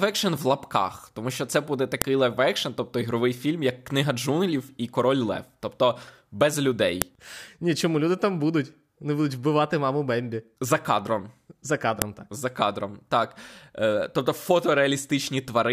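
There's a sharp, loud click at 2.02 s, then again at 7.02 s and 12.02 s, each exactly 5 s after the last. That's a file header played as audio. The speech looks to have been joined or streamed in 5-second WAV pieces without stripping each piece's header, so those few dozen bytes get read as samples. Each one snaps out hard no matter what the speech is doing.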